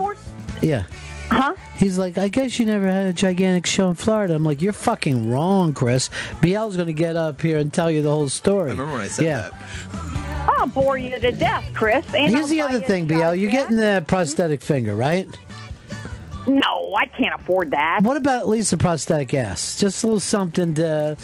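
A resampler restarted on every block runs through the whole clip: each 40 ms block is converted on its own, apparently from 24 kHz up to 48 kHz, so every edge lacks its true neighbours. The result is a steady 25 Hz tick, almost a low buzz, heard only while sound is present.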